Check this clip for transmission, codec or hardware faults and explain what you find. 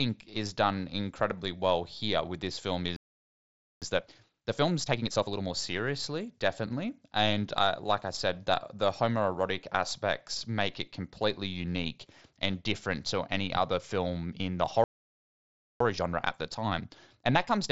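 Yes, the clip has two playback stalls, each followed by time-compressed catch-up. The speech itself is carried through a Bluetooth mSBC headset codec, which accounts for nothing above about 8 kHz and isn't a fault.

Playback stall: After "here with this film", the sound cuts out from 2.96 to 3.82 s (0.85 s), and again from 14.84 to 15.80 s (0.96 s). The player was likely starved of data or blocked. On a waveform these show as flat, dead gaps, and on a spectrogram as fully blank vertical bands.

Time-compressed catch-up: From 3.82 to 5.52 s, ending just before "seriously definitely", the speech runs at 1.5 times normal speed. After "other film in the", it runs at 1.25 times from 15.80 s to the end. Small pieces are cut out and cross-faded, so the speech sounds hurried at normal pitch. A spectrogram shows normal pitch harmonics with compressed timing.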